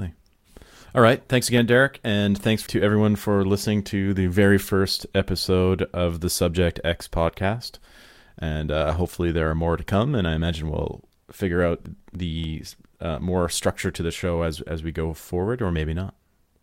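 Speech with CD scratch ticks at 1.28–1.87 s and 11.71–12.73 s, after "I imagine we'll figure": brief, evenly spaced ticks about eight a second, one per disc turn, unlike random vinyl clicks.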